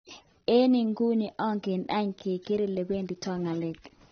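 Speech throughout, with plainly audible AAC compression damage, likely from a low-bitrate AAC-LC encode around 28 kbps. Nothing survives above 6.5 kHz, so it sounds dull, and sibilants and held sounds turn smeared and fizzy.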